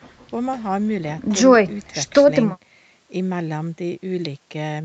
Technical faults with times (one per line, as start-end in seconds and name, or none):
none